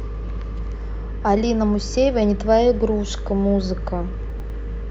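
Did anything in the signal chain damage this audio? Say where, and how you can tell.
Yes. Chunks out of order at the buffer stage: from 4.3 to 4.5 s the speech jumbles, with three hard joins. One 100 ms chunk was written late and plays after its successor. Unlike a dropout, nothing is missing; the audio is only rearranged.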